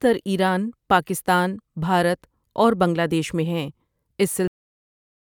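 At 4.48 s the speech stops abruptly in a cut-off end. The final stretch of audio was never written out or played back, so the signal is truncated mid-sound instead of ending naturally. There is no decay or release tail. The level drops straight to digital silence, which holds for the remaining 0.79 s of the clip. The effect is a hard, unnatural stop, as though playback were interrupted partway through the speech.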